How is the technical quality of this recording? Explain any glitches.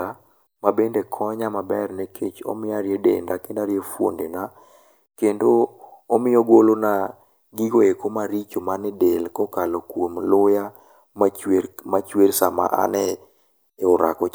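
No glitches turn up anywhere in this recording, so there's nothing here that needs explaining.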